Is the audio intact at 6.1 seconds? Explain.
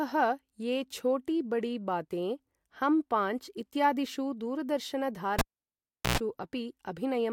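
No, 6.1 seconds falls inside a cable pulled and plugged in event running from about 5.39 to 6.18 s. A pop kills the speech for roughly 0.74 s, then there's a brief 60 Hz mains buzz, about 107 ms, while only the plug tip makes contact, before another pop brings the sound back.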